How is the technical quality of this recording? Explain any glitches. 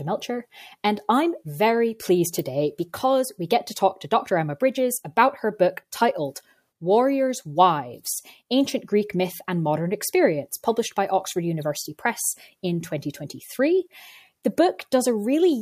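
Nothing in this speech recording stands out as a technical problem; there's no glitch worth pointing to.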